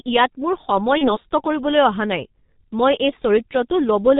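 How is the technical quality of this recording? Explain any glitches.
The technical quality is poor. The speech is heavily codec-damaged throughout, and there is one short dropout.

Throughout, the G.723.1 codec is audible. Nothing is heard above 4 kHz, so the speech is muffled. It also sounds hoarse, with smeared consonants. The heavy damage points to a low rate of around 6.3 kbit/s, and 30 ms frames let the voice model update only slowly.

From 0.98 to 1.17 s, VoIP packet loss concealed by the speech codec is heard. About 30 ms of audio went missing, which fits one lost frame. The decoder repeated its last pitch and filter at falling gain, giving a brief, fading stretch. The speech stays weakened until about 1.17 s.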